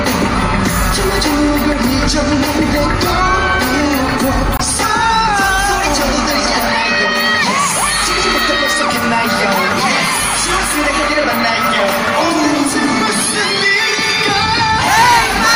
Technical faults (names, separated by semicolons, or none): hard clipping; corrupt frame muted